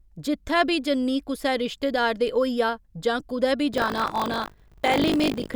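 From 3.72 s, right after "होइया जां कुदै बी", buffer tearing sets in and lasts to the end: the speech takes on a robotic rattle at 50 Hz. Writer and playback have drifted so they collide within each period, leaving roughly a fifth of every buffer filled with audio about 40 ms stale, hard-spliced on both sides. Unlike clicks or dropouts, nothing goes silent. The buzz is strictly periodic and rides only on the signal.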